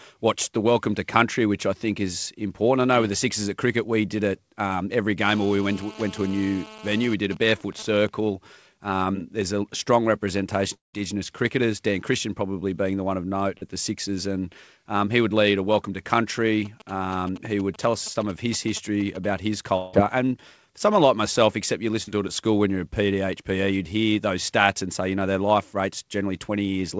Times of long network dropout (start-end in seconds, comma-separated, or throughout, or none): 10.74-10.95, 19.77-19.95